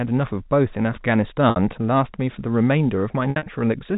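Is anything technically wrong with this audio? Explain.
Yes, there is packet loss with pitch repetition, in speech carried over G.711 telephone coding. At 1.5 to 1.56 s, 60 ms of audio was lost, and the receiver filled the gap by repeating the last pitch period, which sounds like a briefly held, buzzy tone. From 3.3 to 3.46 s, 120 ms went missing in gaps spread across 160 ms, none longer than 60 ms, producing a stuttering run of buzzy, repeated fragments.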